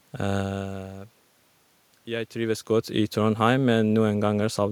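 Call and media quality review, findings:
No call or media quality faults found; the room noise and the level shifts around half a second and two seconds, where the talker moves relative to the microphone, come from the recording space, not the system.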